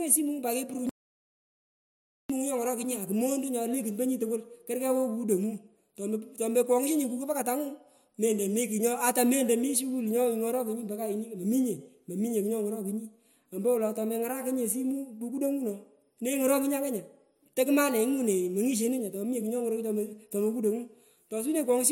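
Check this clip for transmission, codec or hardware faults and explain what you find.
One fault stands out. From 0.89 s to 2.30 s the speech cuts off abruptly into dead, total silence with no room tone, then resumes mid-flow about 1.4 s later. This is an audio dropout to silence, likely from the input signal being lost while the recorder kept writing silence.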